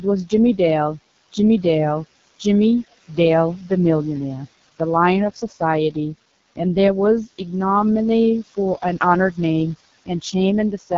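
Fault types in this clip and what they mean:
Noise suppressor artifacts: the suppressor pulls steady background down by about 16 dB frame by frame, so residual noise pumps between phrases.
AMR wideband (HD Voice) codec: the speech is squeezed into a very low-rate mode, which fits 6.6 kbit/s, so it comes through heavily rough and raspy, with nothing above 7.5 kHz.
Speech cut by the noise suppressor: from 5.32 to 5.6 s the suppressor mistakes part of the speech for noise, dipping it by up to about 12 dB, so a short stretch sounds swallowed.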